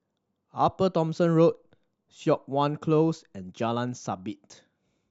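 Nothing in the speech stood out as a technical problem on listening.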